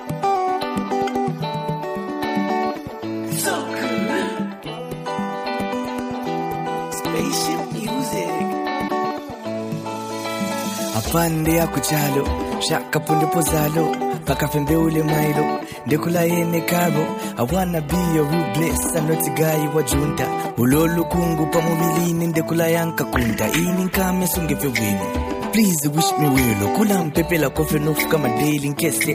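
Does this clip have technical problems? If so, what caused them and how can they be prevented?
Yes, there's damaged data in the compressed stream around 8.84 to 8.91 s: corrupted bytes threw the decoder off sync, giving a brief glitch. Checksummed transfers and verified copies would prevent it.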